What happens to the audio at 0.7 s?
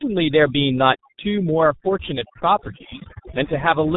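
At 0.7 s, as throughout the clip, overdone noise removal is switching off frequency bands near the estimated noise floor, leaving near-silent gaps with twinkling specks. On top of that, heavy G.723.1 codec coding at 6.3 kbit/s discards everything above 3.8 kHz and updates its voice model slowly, so the speech is muffled and hoarse, with blurred consonants.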